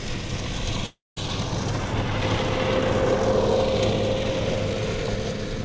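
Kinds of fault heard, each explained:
Long network dropout: From 0.86 to 1.18 s the sound turns into a fading buzz carried on from what came before, then about 180 ms of silence, and resumes with roughly 300 ms missing. This likely reflects a network stall that the band-limited call path concealed.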